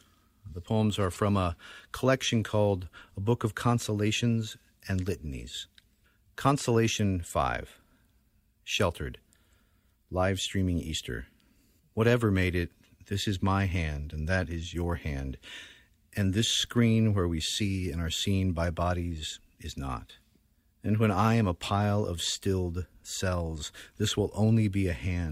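No technical faults can be heard in this speech recording.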